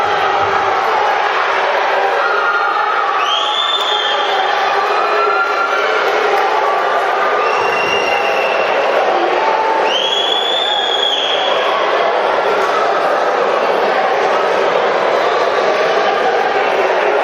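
No technical faults are audible anywhere in the recording.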